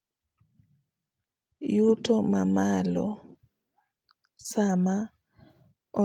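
At 2.97 to 2.99 s there's a lost packet rebuilt from error correction: a 20 ms patch, likely one dropped packet, played from the next packet's low-bitrate copy, sounding briefly rougher and noisier.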